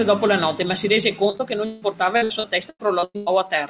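Repeated packet loss (robotic sound) runs from 1.30 to 3.28 s, starting just after "notte ma si rese". Packets keep going missing, and each hole is covered by stretching the last bit of received sound. About ten gaps crowd into this stretch, the longest 161 ms, so roughly a third of it is filler. The speech turns choppy, with pieces dropped out. Over the call path's 4 kHz band ceiling, which fits G.711 A-law at 64 kbps, the effect sounds robotic.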